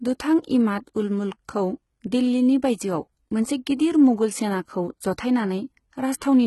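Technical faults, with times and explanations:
Throughout, HE-AAC compression: the audio stops at 11.8 kHz, and the treble below that sounds rebuilt rather than real, with gritty, lispy s sounds. The likely cause is spectral band replication copying lower bands upward. The heavy damage fits a bitrate near 16 kbps.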